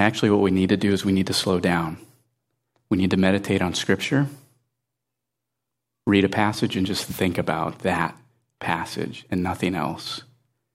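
Speech recording with nothing technically wrong, so there are no times or causes to give.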